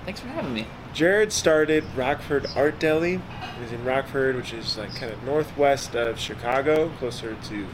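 From 5.09 to 7.24 s, ten CD scratch ticks recur at about five per second, the longest lasting about 7 ms. A disc blemish defeats error correction once per revolution, forcing interpolated or muted samples. The waveform shows brief notches; the spectrogram shows evenly spaced thin vertical lines.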